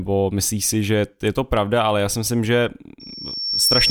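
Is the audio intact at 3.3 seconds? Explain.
No. At 3.3 seconds a loudspeaker feedback squeal is under way. Starting at 3.00 s, right after "já si myslím že", a single piercing tone near 5.5 kHz swells over roughly three quarters of a second until it sits a few decibels above the speech, and it continues to the end of the clip at 3.90 s. A microphone is picking up the loudspeaker it drives, and at that frequency the loop gain exceeds one, so the tone keeps feeding itself and growing.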